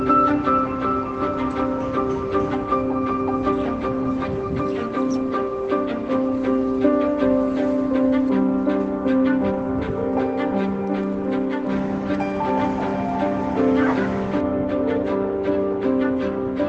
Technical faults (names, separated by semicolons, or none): none